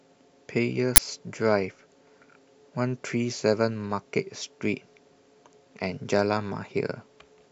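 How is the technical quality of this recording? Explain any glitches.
The recording has one glitch. At 0.96 s, an uninitialised buffer plays for 20 ms: memory left over from before was output as samples, giving a loud crack or burst of digital noise rather than a silent dropout.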